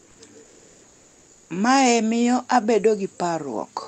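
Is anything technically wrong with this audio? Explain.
Yes. From 0 to 0.19 s and from 0.43 to 1.47 s, comfort noise replaces the background. The sender, likely using Opus discontinuous transmission, stopped sending during these pauses, and the receiver filled them with smooth, featureless synthetic hiss about 2 dB quieter than the real background.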